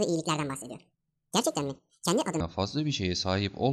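From 0.0 to 2.40 s, a section at the wrong speed plays about 1.78 times too fast. The speech sounds hurried and roughly ten semitones high, likely from a clock mismatch.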